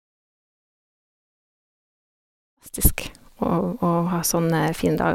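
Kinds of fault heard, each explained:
No faults heard in this speech clip; the level rises gradually from about 2.5 s to 3.07 s with no click or hard edge.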